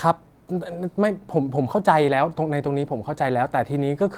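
No technical faults are audible.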